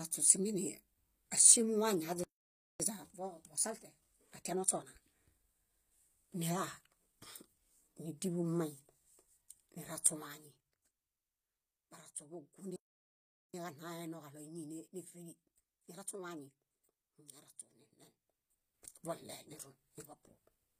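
Speech runs throughout with plainly audible codec damage that is likely HE-AAC compression, at a rate consistent with a 24 kbps HE-AAC v2 stream. Nothing reaches above 15.5 kHz. The treble below that limit is not the original signal. It is rebuilt by spectral band replication, which copies lower bands upward and shapes them with a coarse envelope, so the upper harmonics do not line up with the coded lower band. Right after "áŝimu wañi" the audio drops out from 2.24 to 2.80 s, a gap of about 0.56 s. This is likely a playback stall, where the player ran out of data or was blocked and produced silence until it recovered. A time-compressed catch-up follows from 2.80 to 5.04 s, with the speech hurried to 1.25 times normal speed at unchanged pitch as the player trims its backlog by cutting out and cross-fading short pieces. A second playback stall silences the output from 12.76 to 13.54 s, about 0.78 s, and again the likely cause is a starved or blocked player. 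Another time-compressed catch-up runs from 13.54 to 16.54 s at 1.1 times speed, so the second recovery is less hurried than the first, even though it follows the longer gap.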